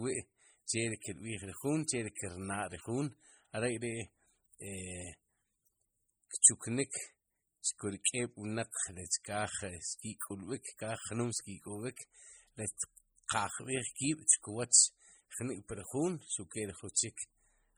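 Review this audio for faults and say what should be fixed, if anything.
Heavy MP3 compression runs through the whole speech clip. The sound is watery and swirly, with chirpy, metallic s sounds and smeared consonant attacks, which points to a low bitrate around 32 kbps. Weak frequency lines are dropped and then return from one frame to the next, which makes the shimmer. Noise-reduction artefacts sound different: their warble follows the background hiss and fades in pauses. This damage sits on the speech itself. Encoding at a higher bitrate would likely prevent it.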